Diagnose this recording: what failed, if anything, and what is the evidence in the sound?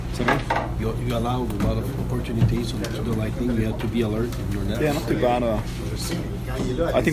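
Nothing failed; no fault is audible anywhere.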